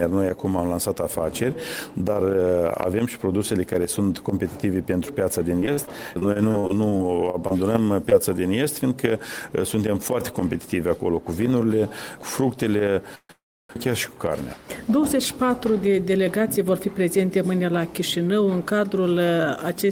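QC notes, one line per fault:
5.59–7.52 s, repeated packet loss (robotic sound): 14 holes, the longest 42 ms, patched by continuing the last sound. About 220 ms is lost and it sounds choppy. It is a run of drops, not one.
8.10–8.13 s, short concealed packet loss: a single brief smear, about 20 ms of sound gone and bridged by a 16 ms fill. It is an isolated smear rather than a sustained robotic stretch.
13.15–13.71 s, call audio freeze: the last sound hangs and fades into silence, first 60 ms and then 320 ms. Playback then resumes where it stopped with nothing missing, likely because delayed packets emptied the jitter buffer.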